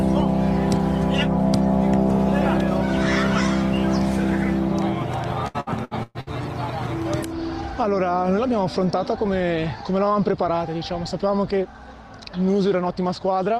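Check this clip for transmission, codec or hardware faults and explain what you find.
One transmission fault stands out. Repeated packet loss (robotic sound) runs from 5.47 to 6.30 s: five gaps, the longest 117 ms, are each patched by extending the preceding sound, so nearly half that stretch is concealed, leaving it choppy with pieces missing.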